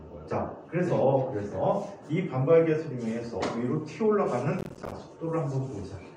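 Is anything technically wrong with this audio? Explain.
Yes. From 4.59 to 4.92 s there is processor overload crackle. The processor falls behind and misses a run of playback deadlines, each one leaving a short hole of silence with hard edges, which points to buffers of around 10 ms and about 20 misses in that third of a second. It is heard as a gritty, tearing crackle over the sound. On a waveform the signal is chopped by many brief flat gaps, and a spectrogram shows repeated thin vertical broadband stripes at each abrupt edge.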